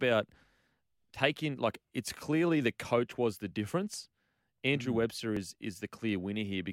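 At 3.37 s in this speech clip, between "clearly the coach was" and "the difference", an overlap between stream segments cuts out roughly 12 ms, and the waveform jumps to a later point in the sound. It is heard as a small click or skip. The same fault recurs at 5.37 s, losing about 14 ms. The two events are 2 s apart, which fits segment boundaries where time stamps overlapped and the player trimmed sound that was never duplicated. On a spectrogram each appears as a brief vertical seam.

At 6.09 s there is a single sharp click. It was likely caused by dropped samples: only a couple of samples, a tiny fraction of a millisecond, are missing, so the waveform steps abruptly from one value to a later one without removing any audible sound. A spectrogram shows it as a thin vertical line spanning the full frequency range, and a zoomed waveform shows a single discontinuity.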